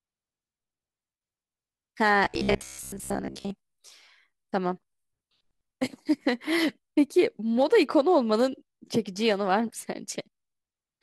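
Speech clip with robotic sound from repeated short buffers between 2.25 and 3.51 s: the voice collapses into a rigid metallic buzz near 66.7 Hz, which fits a 15 ms segment being looped for roughly 70% of the span. Likely cause: late audio delivery forcing buffer repetition.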